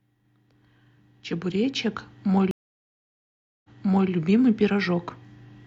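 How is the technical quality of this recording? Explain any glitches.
There's one real glitch here, a stream reconnect. At 2.51 s the speech drops out for about 1.13 s, then comes back by 4.10 s, rewound roughly 0.46 s, so you hear a short stretch repeated. The connection broke, the player reconnected and a fresh decoder picked up from an earlier resent chunk.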